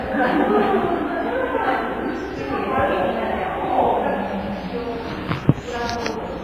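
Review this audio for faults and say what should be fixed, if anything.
Throughout, heavy WMA compression is the likely cause of the ringing, washy texture. A hiss that swells with the signal smears across tens of milliseconds, which fits a low bitrate around 24 kbps. A spectrogram shows nothing above 15.4 kHz and gappy, zeroed weak components. Re-export from the original source with a higher-bitrate or lossless codec.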